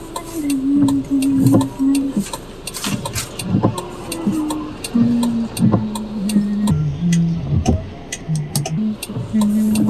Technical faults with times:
6.71-8.78 wrong sample rate

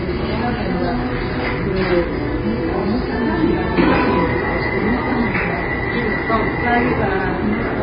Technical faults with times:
0.00-7.82 AAC compression

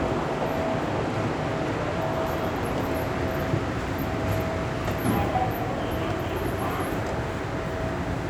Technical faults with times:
none

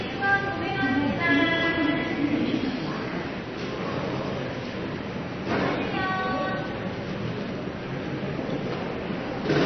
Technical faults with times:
0.00-9.65 MP3 compression

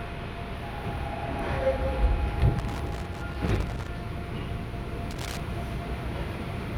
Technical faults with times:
2.59-3.88 loose connector crackle
5.11-5.40 loose connector crackle

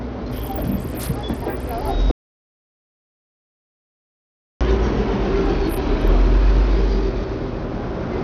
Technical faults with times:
0.00-8.24 Bluetooth SBC compression
2.11-4.61 audio dropout to silence

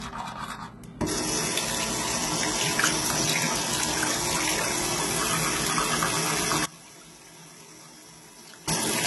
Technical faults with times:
0.00-9.06 low-bitrate audio saved at a high bitrate
6.65-8.68 one channel inverted

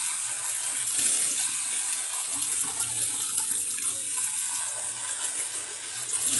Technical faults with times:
0.00-6.40 HE-AAC compression

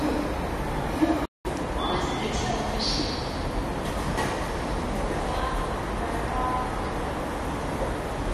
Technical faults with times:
1.25-1.45 playback stall

